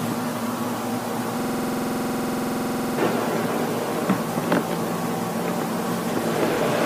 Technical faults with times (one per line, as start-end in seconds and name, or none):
1.40-2.98 system hang loop